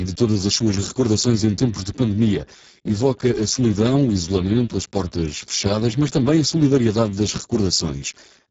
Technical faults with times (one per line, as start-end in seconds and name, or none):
0.00-8.51 Speex codec